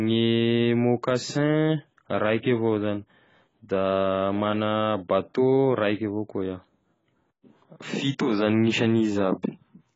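Speech, heard through heavy AAC compression from start to finish. Nothing is left above about 7.6 kHz, so the voice sounds dull and boxed in. Sibilants come out smeared and fizzy, and held vowels warble. The likely cause is AAC-LC at a very low bitrate, which fits something near 16 kbps. The encoder runs short of bits, lowers its cut-off and quantises the remaining bands coarsely. From 8.27 s to the end at 9.96 s, sample clock jitter adds a faint rough hiss. The converter's timing wanders by around a microsecond, so each sample lands slightly off time. The error is largest where the waveform moves fastest. It rides on loud, bright sounds and disappears in pauses, sitting roughly 45 dB below the speech.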